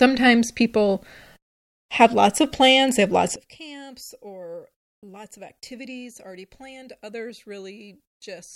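One channel inverted, from 3.36 s to 8.56 s: in the mono sum the speech suddenly falls by about 21 dB to a faint remnant. This is likely one stereo channel with reversed polarity, so the content both channels share cancels and only their difference remains.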